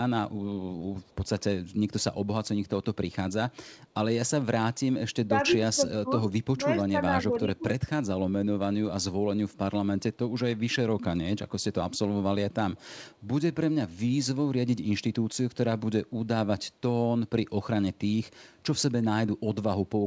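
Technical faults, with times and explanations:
1.02–1.27 s, 12.76–12.81 s and 13.15–13.22 s, echo leak: a faint, delayed ghost of the talker's sound trails behind, about 35 dB below the speech in the first and second stretches and about 40 dB below in the third, arriving roughly half a second late (474 ms first, 499 ms later). This is likely a far-end loudspeaker being picked up by its own microphone, with the echo canceller letting brief scraps slip back down the line.
4.46–4.51 s, 5.26–5.42 s, 5.59–6.32 s and 6.55–7.70 s, speech suppressed in double talk: the speech ducks and thins in short pieces, dipping about 25 dB in the brief first dropout and about 10 to 15 dB in the later ones, with the affected portions totalling around half a second in the longest stretch. The likely cause is both sides talking at once, with the echo canceller unable to separate this talker from loudspeaker echo and turning everything down together.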